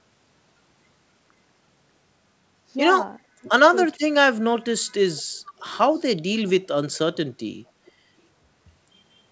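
Speech suppressed in double talk cuts into this speech recording at 3.30 to 3.48 s and again at 3.98 to 4.21 s, with the level falling by about 40 dB and then about 35 dB for roughly a fifth of a second each time. The likely cause is an echo canceller that, with both parties talking at once, could not tell this talker from the returning loudspeaker signal and pulled everything down together. Echo leak follows at 5.59 to 6.00 s, with shorter scraps at 7.14 to 7.18 s and 7.86 to 7.92 s. A faint, delayed copy of the speech arrives 455 ms behind the original, sitting about 30 to 35 dB below it. This is likely residual echo that a far-end loudspeaker's canceller failed to remove and sent back down the line. The band stops at 8 kHz throughout, as expected from a wideband call codec.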